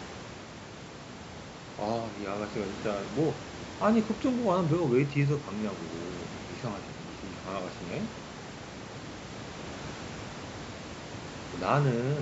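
No faults are audible in this speech: the call microphone processing rolls off the lowest bass, and the room noise sits about 16 dB below the speech, both as expected for the capture chain.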